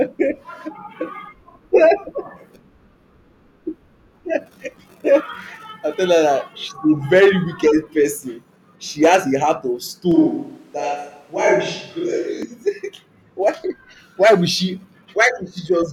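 It's a speech clip, and from 10.1 to 12.4 s it sounds like a switch to a distant microphone: suddenly roomy and hollow, thinner in the bass, at much the same level, with faint room noise about 40 dB down. Likely the close mic dropped out.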